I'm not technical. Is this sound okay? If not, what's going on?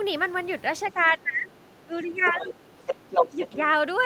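No. At four points you can hear the other side's voice leaking through: a faint scrap at 1.01 to 1.1 s, a clearer stretch from 1.99 to 2.49 s, a short burst at 2.87 to 2.94 s, and from 3.1 to 3.57 s a voice as loud as the talker. Their loudspeaker is likely feeding back into the microphone without being fully cancelled.

There is also speech suppressed in double talk. The talker's voice sinks sharply from 1.17 to 1.5 s, dips more mildly from 1.86 to 2.61 s, and briefly wavers around 3.31 to 3.38 s. These dips likely come from the echo canceller turning everything down when both sides speak at once.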